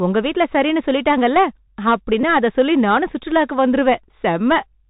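Right from the start the whole speech track has that Bluetooth CVSD headset codec sound, which fits a 64 kbps narrowband link. Nothing above 4 kHz comes through, s sounds go scratchy, loud bright bits distort because the adaptive step can't keep up, and a grainy hiss sits underneath.

Then from 2.21 to 2.23 s there's a Bluetooth headset packet repeated run. About 22.5 ms of audio was lost, which points to six lost packets. The chip kept replaying the last packet, so that stretch turns into a short buzz near 267 Hz.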